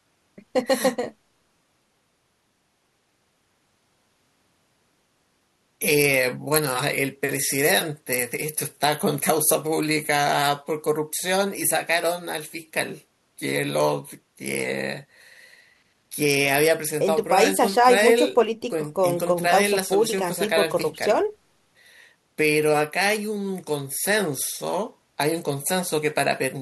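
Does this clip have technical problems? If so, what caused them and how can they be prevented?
No, there's nothing in this recording that calls for a cause or a preventive fix.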